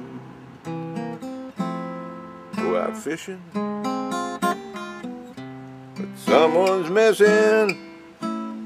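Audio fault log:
No faults detected in the audio.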